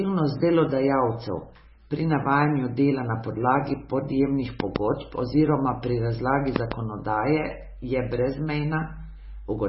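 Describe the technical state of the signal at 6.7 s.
A loud pop at 6.56 to 6.74 s: two sharp pops, roughly 20 dB above the speech, most likely from a sudden voltage step or pulse added to the signal. MP3 compression is also present here: heavy, watery smearing with nothing above 5.6 kHz, likely from low-bitrate encoding, around 17 kbps.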